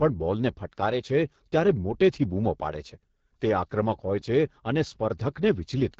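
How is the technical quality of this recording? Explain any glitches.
The recording is limited by AMR wideband (HD Voice) codec damage that runs through the whole clip. The speech is band-limited, with nothing above 7.5 kHz. It also has a plainly audible rough, raspy texture. The codec models the voice as pulses exciting a vocal tract filter up to 6.4 kHz and fills the top band with shaped noise. At its lowest rates that model is too coarse to hold detail. The grittiness points to one of those bottom modes, around 8.85 kbit/s.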